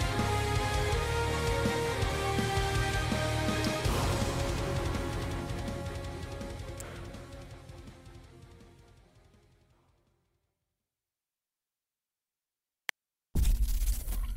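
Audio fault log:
3.64 s, 6.80 s, 12.89 s: electrical switching spike. A nearby switch or motor arcing was likely picked up on the audio line, laying brief sharp snaps over the sound, peaking around -20, -25 and a much louder -10 dBFS respectively.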